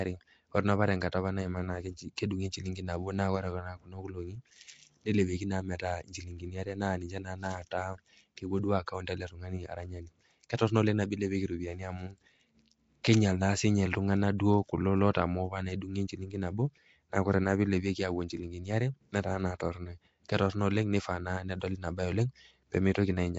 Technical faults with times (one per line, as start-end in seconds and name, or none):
0.00-23.39 Nellymoser compression
22.94 pre-echo